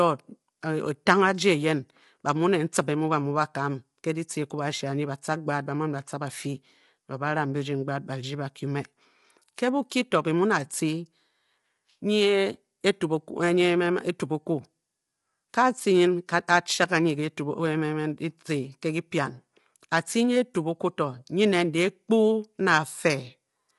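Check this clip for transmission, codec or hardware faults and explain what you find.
There's one codec problem, and it runs the whole way through. The speech has a rough, grainy texture, with a noisy fizz between the pitch harmonics, and nothing comes through above about 11.6 kHz. That's most likely low-delay AAC compression of the AAC-ELD kind used for video calls. Its very short frames can't separate the harmonics cleanly, so bits get spread thin, and the damage here is plainly audible, which fits a bitrate around 32 kbps.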